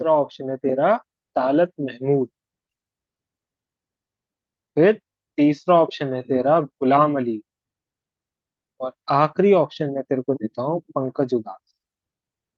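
Speech recording with no audible technical faults.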